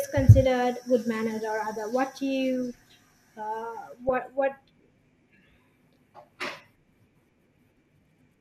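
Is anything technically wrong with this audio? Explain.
Yes. From 4.09 to 4.18 s the speech is disturbed by DAB burbling. Weak reception let bit errors slip past the error correction into the MP2 audio stream. The corrupted samples put short blips of noise into single sub-bands, and corrupted scale factors make sub-bands leap in level for up to a frame, which fits roughly half a dozen damaged frames. The result is a brief burst of burbling over the speech. Unlike a dropout or mute, the damage shows up as garbled band energy rather than silence.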